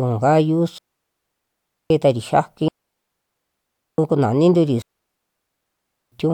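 At 0.78 s the speech drops into a clean hole of near silence until 1.90 s, a digital wireless dropout lasting about 1.12 s. The same happens from 2.68 to 3.98 s and from 4.82 to 6.12 s, each 1.3 s long. The receiver lost too much data and muted with a very fast fade, leaving no noise burst on either side. The waveform collapses to a flat line and the spectrogram shows blank vertical bands with sharp edges.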